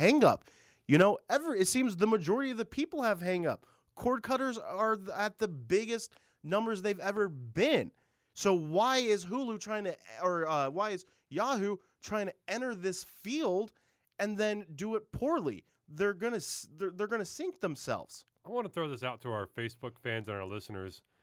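Microphone overload from 0.93 to 1.02 s in this speech clip, just before "ever it seems the": peaks sound harsh and crackly, likely because input gain drove the converter about 5 dB past full scale, flattening a few percent of samples. Microphone volume stepped down at 1.02 s: voice and background drop about 5 dB at once, likely the call software cutting input gain after that clipped peak.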